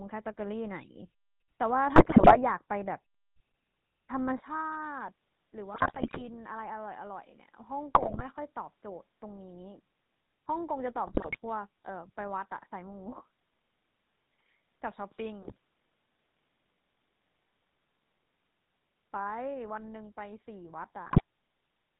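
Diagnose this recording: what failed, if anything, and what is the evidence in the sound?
The whole clip sounds buzzy and gravelly, with no top end above 4 kHz. This is the GSM full-rate codec at 13 kbps, in the codec stage. It rebuilds speech from a vocal-tract filter driven by sparse, regularly spaced pulses, which produces the rough, coarse texture.

Squawks, pops and gargling break out at 1.96–2.38, 5.74–6.28, 7.94–8.22, 11.07–11.37, 15.42–15.57 and 21.06–21.21 s. These are GSM bit errors on the network link, with about 3–6% of bits corrupted. Damaged filter, pitch and gain values distort the spectrum or inflate the level frame by frame.

From 4.4 s onward the sound turns duller and drops by roughly 5 dB. A faint new noise floor appears about 40 dB down, with no gap at the change. The likely cause is the input switching to a poorer device at the driver stage, mid-recording.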